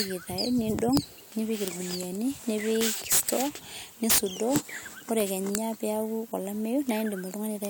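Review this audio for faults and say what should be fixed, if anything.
Integer overflow cracks the speech at 0.00, 0.97, 1.68 and 4.56 s, and across 2.81–3.33, 4.10–4.18 and 5.20–5.55 s. Peaks overshoot the integer limit by about 1 to 18 dB and wrap to the opposite sign, snapping across the full range. Clipping would only flatten them, so these cracks are far more violent. Saturating arithmetic or headroom before the integer stage would prevent it.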